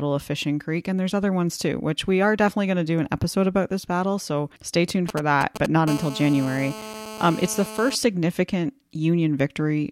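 Just after "stay tuned", from 5.09 to 5.66 s, GSM signalling bursts gallop in. A nearby phone's radio pulses get rectified into brief 217 Hz buzzes, nearly as loud as the speech.

From 5.88 to 7.95 s, a steady GSM phone buzz follows, about 13 dB below the speech. It's a hard, raspy 217 Hz tone, pointing to a phone in a call.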